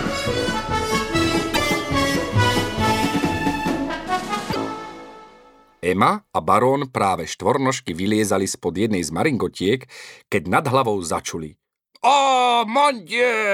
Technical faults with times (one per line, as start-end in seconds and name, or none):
1.50-1.57 damaged data in a compressed stream
4.48-4.56 damaged data in a compressed stream